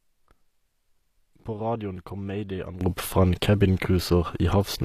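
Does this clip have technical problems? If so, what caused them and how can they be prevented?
Yes. Throughout the clip, the speech has plainly audible treble damage, likely from HE-AAC compression at a low bitrate around 24 kbps: the upper band is rebuilt from copied lower bands, so s sounds turn gritty or metallic. Unlike a plain low-pass cut, treble remains but sounds synthetic.

At 2.81 s the level steps up about 16 dB and stays there to the end, likely a sudden gain jump: a digital gain change applied without a ramp. Unlike a fade, it is instantaneous, and the background noise rises with the speech.

To prevent these, encode at a higher bitrate with plain AAC or a lossless format, and apply gain changes through short ramps.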